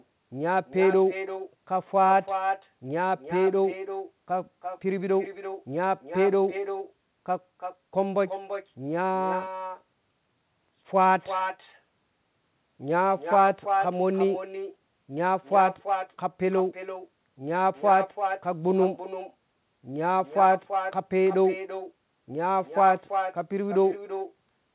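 Throughout the speech, an echo with no canceller trails every phrase. The far end's loudspeaker feeds its microphone, returning a thinner copy about 9 dB down, roughly a third of a second late, band-limited below 4 kHz like the call itself.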